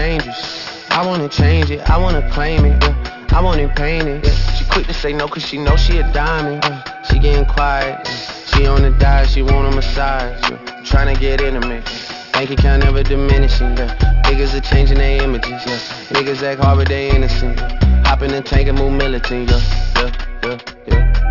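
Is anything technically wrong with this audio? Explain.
Yes. Aliasing runs through the whole clip. The audio appears to have been downsampled without an anti-aliasing filter, which fits a rate of about 12 kHz. Content above 6 kHz folds back below it as gritty, metallic tones, roughly 15 dB below the signal.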